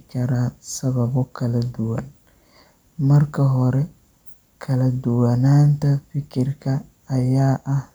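A speech recording with nothing technically wrong with it.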